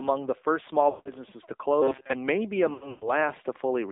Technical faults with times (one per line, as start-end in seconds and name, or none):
0.00-3.92 AMR narrowband mobile codec
0.90-1.11 lost AMR speech frames
1.82-2.13 robotic sound from repeated short buffers
2.74-3.11 lost AMR speech frames